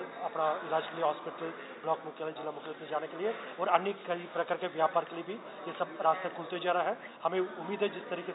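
There are no technical faults to describe in time order, because none can be heard anywhere in the audio.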